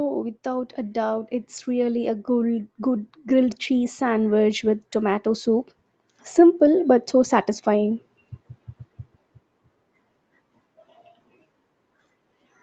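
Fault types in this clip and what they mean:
Automatic gain rising: the automatic gain control judged the incoming speech too quiet and kept pushing its gain upward, so level climbs steadily from 0.43 s to 8.03 s, about 12 dB in total. Because the gain acts on the whole signal, the voice and the background noise swell together rather than the speech alone getting louder. The rise is slow and continuous over more than seven seconds, heard against the call path's band limit at 8 kHz.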